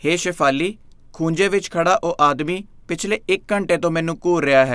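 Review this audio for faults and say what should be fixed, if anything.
No faults can be heard anywhere in the recording. Nothing needs fixing.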